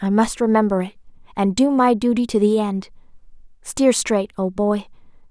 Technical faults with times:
none

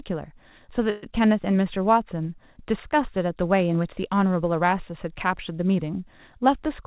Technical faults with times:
0.90-1.05 call audio freeze
6.32-6.79 jitter buffer speed-up

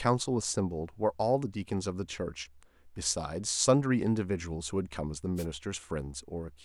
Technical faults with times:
5.36-5.46 wireless microphone noise hit

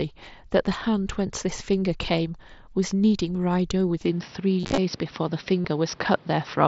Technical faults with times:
4.06-6.68 input switched to a poorer device
4.59-4.78 concealed Bluetooth headset packet loss
5.62-5.65 concealed Bluetooth headset packet loss

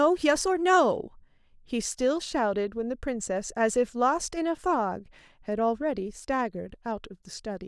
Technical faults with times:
none

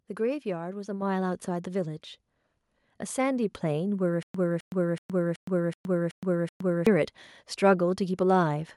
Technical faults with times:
1.02 microphone volume stepped up
4.23-6.87 stutter with silent gaps

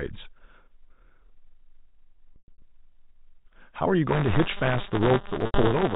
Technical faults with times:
2.34-2.62 packet loss with pitch repetition
4.08-5.96 buffer tearing
5.46-5.54 packet loss with pitch repetition

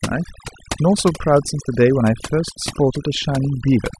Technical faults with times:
0.00-3.99 overdone noise removal

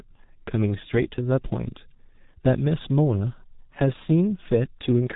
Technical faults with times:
0.00-5.15 G.723.1 codec

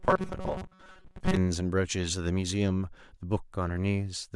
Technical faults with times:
0.01-1.37 robotic sound from repeated short buffers

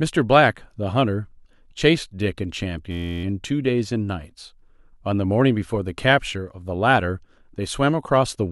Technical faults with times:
2.91-3.24 system hang loop

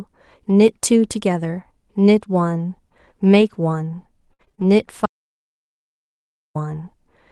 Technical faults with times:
3.41-3.55 lost packet rebuilt from error correction
4.33-4.62 repeated packet loss (robotic sound)
5.06-6.55 audio dropout to silence

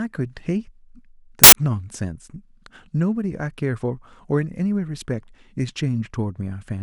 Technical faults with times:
1.44-1.52 samples built from the wrong bytes

